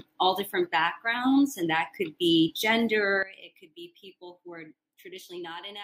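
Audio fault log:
3.23 s to the end, sudden gain jump: the level falls by about 17 dB in a single step and stays down, with the background noise dropping right along with the sound. That's likely a digital gain setting applied instantly, with no ramp.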